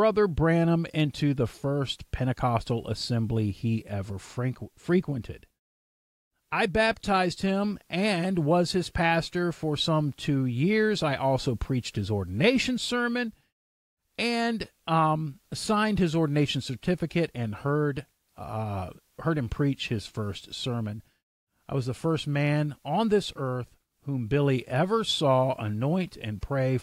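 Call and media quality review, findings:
Nothing to flag here: listened through the whole clip and didn't hear any faults worth opening a ticket for.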